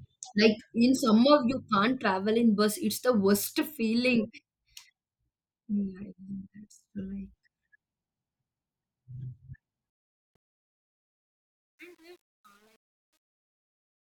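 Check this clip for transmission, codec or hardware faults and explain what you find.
One fault is present: truncation distortion on the fade-out at the end of the speech. From 9.90 s to 14.10 s the level falls away over a fade that begins around 10 s and ends at 14.1 s. Its quiet tail is not clean. The fade stage keeps too few bits and adds no dither, which fits about 9 bits of resolution. As the level drops, the waveform collapses into coarse square steps. From 10.63 s to 14.11 s the tail sounds gritty.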